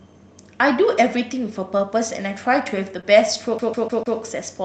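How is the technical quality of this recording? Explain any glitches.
The recording has three audible glitches: two brief dropouts that the decoder concealed, and a stretch near the end where the sound repeats like a skipping disc.

Short concealed packet loss occurs from 1.77 to 1.81 s and again from 3.01 to 3.05 s. Each time about 20 ms of audio failed to arrive. The decoder extended the preceding sound, pitched or noise-like, before blending back, leaving a brief smear or wobble.

CD stuck on one turn runs from 3.58 to 4.18 s. A 150 ms segment plays four times in succession, each repeat separated by a short mute. This comes from a scratch sending the laser back to the same track position on every disc rotation, producing a fast, even stutter.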